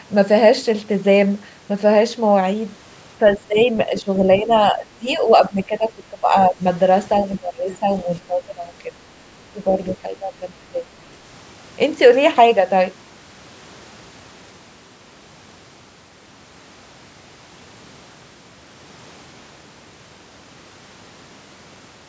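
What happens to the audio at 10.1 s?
Speech suppressed in double talk runs from 9.49 to 10.85 s, so 10.1 s falls inside it. The speech sinks in level, by roughly 15 dB at its deepest, over stretches adding up to about a second. The likely cause is an echo canceller that heard both sides talking at once, could not tell this talker apart from the returning loudspeaker echo, and turned everything down together.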